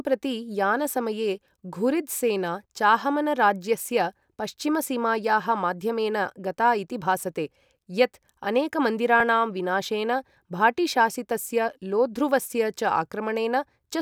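At 9.20 s the speech has an underrun with held sample: the output buffer briefly ran dry, and the converter froze on its last value for about 0.73 ms, which points to a stall of roughly 32 samples. On a waveform this shows as a tiny flat step. Since essentially no audio was lost and playback resumed where it paused, the join is soft, heard at most as a faint tick, and a spectrogram shows only a thin, weak vertical line.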